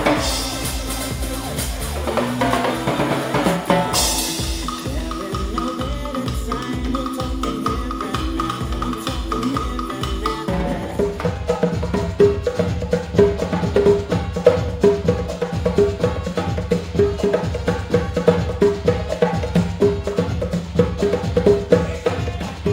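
Throughout the clip the top of the band sounds dulled, with a faint metallic shimmer riding on the brightest sounds. This is imaging from linear upsampling. Straight-line interpolation left a mirrored spectrum between 12 kHz and 24 kHz, roughly 25 dB down, which fits a 24 kHz source raised to 48 kHz.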